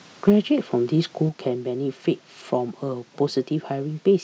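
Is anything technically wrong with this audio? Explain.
Yes. From 0.28 to 0.30 s there is microphone overload. The input gain was likely set too high, so the speech peaks ran about 2 dB past the converter's ceiling and a sizeable share of samples were flattened, giving those peaks a brief harsh, crackly edge.

The microphone volume is stepped down at 0.30 s and again at 1.29 s, each time by about 4 dB. This is likely the call software cutting the device's input gain after finding the microphone too loud or clipping. Speech and background drop together in one sudden step, the first coming right after the distorted peak.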